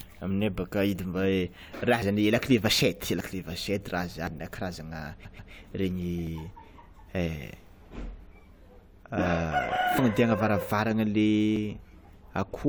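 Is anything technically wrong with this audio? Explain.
Yes, there are two faults. Dropped buffers (overrun) at 2.02 s (just before "zany lakile vachette"), 3.20 s (just after it), 4.27, 6.27, 9.99 and 11.56 s each cut out about 20 to 50 ms, likely because the input buffer was overwritten before it was read. Each gives a jump in the sound, seen as a waveform discontinuity and a thin vertical broadband line on a spectrogram.

Repeated frames from 5.24 to 5.52 s replay one 139.3 ms block twice more, adding 0.28 s. This is heard as a stutter. The waveform and spectrogram show the same pattern tiled three times in a row.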